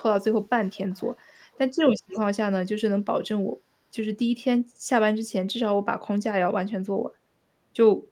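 Speech clip with an echo leak: a faint delayed copy of the talker trails about 395 ms behind, very low from 0.63 to 1.58 s and a touch stronger around 2.09 to 2.2 s, likely a far-end loudspeaker echo slipping past its echo canceller.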